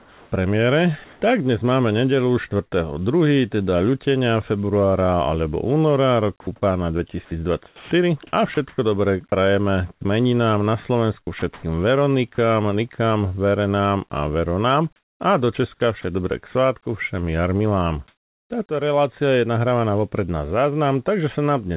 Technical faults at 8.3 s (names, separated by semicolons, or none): sound chopped by the voice detector